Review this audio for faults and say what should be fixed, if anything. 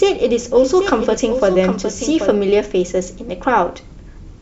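Doubled audio track, from the very start to 2.32 s: a second, full-band copy of the speech trails roughly 0.7 s behind, about 10 dB quieter, dry and without room colour, then cuts off abruptly. It likely comes from a second, slower capture path mixed back in. Monitor and route only one capture path into the mix.

Damaged data in a compressed stream, 1.14 to 1.18 s: a brief glitch where corrupted bytes made the decoder misread frames, lose sync and jump to the next header. Carry the stream over a checked, error-detecting transport so damaged frames are caught and resent.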